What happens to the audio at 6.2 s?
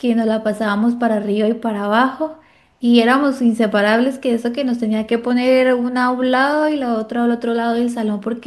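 Nothing goes wrong at 6.2 s; the speech plays through that moment intact, with no dropout, click, distortion or other disruption.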